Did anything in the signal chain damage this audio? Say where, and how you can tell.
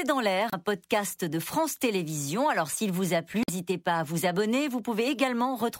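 Yes. Two brief glitches break into the speech: one from 0.49 to 0.54 s, just before "podcast de", and another from 3.42 to 3.50 s, between "s'il vous a" and "pas à vous". This is damaged data in a compressed stream, at the codec stage. Corrupted bytes caused the decoder to misread those frames and lose sync while it searched for the next valid frame header.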